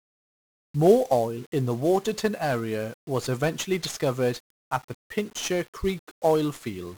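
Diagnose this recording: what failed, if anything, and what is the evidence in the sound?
Fuzzy, crackly speech throughout, treble buried in hiss: a codec fault, 1-bit DFPWM compression, whose one-bit-per-sample steering leaves heavy broadband quantisation noise.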